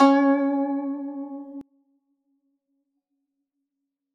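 From 1.61 s to the end of the music, the mono sum collapses by about 27 dB: centred parts and the low end all but disappear, leaving a faint residue. The likely cause is one channel inverted, so the shared content of left and right cancels when they are added together. On a waveform the amplitude drops abruptly at 1.61 s; on a spectrogram the energy fades across the bands, with only weak energy remaining.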